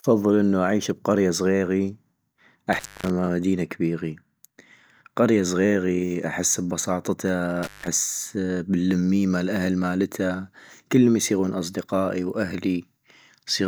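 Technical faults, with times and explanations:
2.73–3.10 s and 7.63–7.88 s, intermittent contact: the speech drops out twice, for about 250 ms just before "مدينة كبيغي" and about 160 ms later, with crackle at each edge as a loose connection opens and recloses, leaving faint hiss while the signal path is broken.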